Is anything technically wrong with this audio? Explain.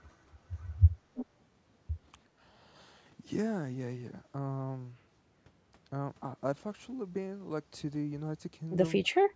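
Yes, there are three kinds of fault, all tied to echo cancellation on a speakerphone call.

From 0.6 to 0.67 s, and again from 1.15 to 1.26 s, a faint, delayed copy of the speech trails the talker by about 328 ms. The first copy is barely audible. The second is much plainer, only about 15 dB below the speech. This is an echo leak: the far side's echo canceller likely failed to fully remove what its microphone caught from the loudspeaker, and the remainder came back down the line.

Between 2.26 and 2.36 s, the room background briefly sinks by about 10 dB, for roughly 70 ms in total, and then recovers. This is background gated by the echo canceller. While its loudspeaker was active, the canceller pulled the microphone level down hard, taking the ambient sound with it until it released.

From 9.07 s to the end, at about 9.35 s, the talker's voice is cut very deeply, for around a fifth of a second in total. 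This is speech suppressed in double talk. With both sides talking at once, the canceller likely could not tell the local voice from loudspeaker echo and turned both down.

The call's microphone processing band-limits the audio, with nothing above 8 kHz.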